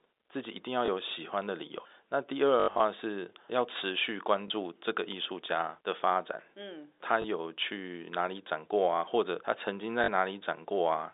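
Packet loss with the last packet repeated breaks into this speech clip at 0.86, 4.48 and 7.22 s as single 20 ms blips, at 10.04 to 10.08 s as a 40 ms stutter, and most heavily from 2.6 to 2.8 s. In that stretch, repeats scattered over 200 ms include an 80 ms run that buzzes robotically at about 50 Hz. Each gap is filled by replaying the previous chunk of sound, which fits 20 ms packets. Underneath, the 300 Hz to 3.7 kHz telephone band of the G.711 line can be heard.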